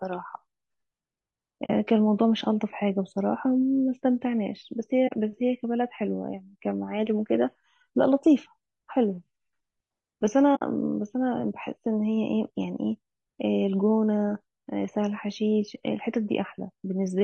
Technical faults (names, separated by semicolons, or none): low-delay AAC compression; AAC frame loss with muting